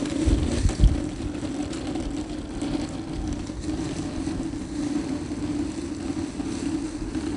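4-bit ADPCM compression runs through the whole clip. Each sample is stored as a coarse 4-bit step from a predicted value, with the step size adapting as it goes. The error this leaves is plainly audible: a gritty hiss that rises and falls with the loudness, and roughness on sharp attacks where the step size lags behind. Nothing is present above 10.6 kHz, which dulls the top end and fits a rate near 88 kbps.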